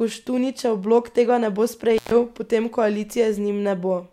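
At 1.97 s, right after "blok tega ne bo", the speech drops out abruptly with a burst of crackle, leaving only faint hiss for about 0.13 s until it crackles back in at 2.11 s. This is an intermittent contact: a loose cable or plug briefly loses its connection, so the signal path opens and the audio vanishes. The scratchy edges come from the contact breaking and re-making.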